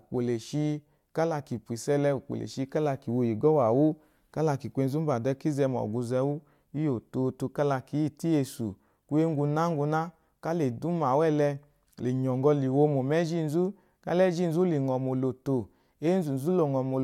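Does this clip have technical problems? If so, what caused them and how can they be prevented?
No, the clip has no technical problems. Nothing in the recording points to a fault in capture, transmission or playback, so there is nothing to prevent.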